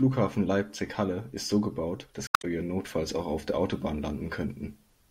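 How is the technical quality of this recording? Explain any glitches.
One glitch stands out in the speech. Damaged data in a compressed stream appears from 2.25 to 2.45 s. Part of the encoded stream there is corrupt, so the decoder misreads those frames, loses its place and must hunt for the next valid frame header before normal playback resumes. For those 0.2 seconds the speech gives way to a chirp, squawk, click or short hole where intact audio should be.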